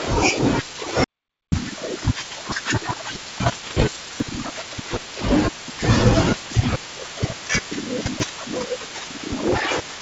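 From 1.04 to 1.52 s, an audio dropout to silence removes about 0.48 s. It is silence with no room tone, unlike a natural pause, most likely because the input was lost while recording continued.

At 1.72, 4.2, 6.76 and 8.2 s, dropped buffers (overruns) make the sound jump ahead by roughly a tenth of a second, a few hundredths, or somewhere between. Unlike the dropout, there is no silent gap. The likely cause is samples being overwritten before the program collected them.

From 3.46 to 3.97 s, 6.32 to 6.54 s and 9.52 to 9.72 s, bit errors on an ADPCM link, at a rate well under one percent, cause pops and rough bursts with brief level wobbles. Unlike a buffer click, each error keeps ringing through the decoder's adaptation, over the clear G.722 wideband band.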